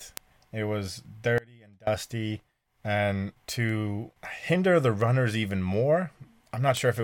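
An audio dropout to a faint residue runs from 1.38 s to 1.87 s, cutting the speech off abruptly for about 0.49 s. Within the gap only a faint sound survives, roughly 25 dB below the normal signal level, and the speech then snaps back in mid-flow. That sudden edge sets it apart from a natural pause or a fade. The likely cause is a brief loss of the wanted feed while the downstream path stayed live.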